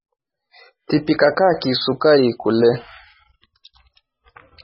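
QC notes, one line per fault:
Throughout: MP3 compression, likely at a very low bitrate such as 16 kbps. The speech has nothing above 5.6 kHz, which would show as a hard flat ceiling on a spectrogram. Heavy damage leaves it watery and swirly, with sibilants chirping metallically as weak frequency lines flicker on and off, seen as speckled, patchy energy below the cutoff.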